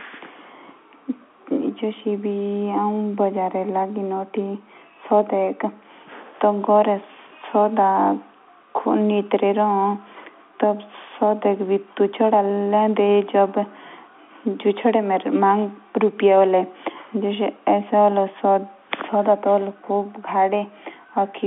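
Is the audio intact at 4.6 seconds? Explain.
Yes, at 4.6 seconds the audio is intact, with the speech carried cleanly through the G.711 telephone path and its narrow band of roughly 250 Hz to 3.5 kHz.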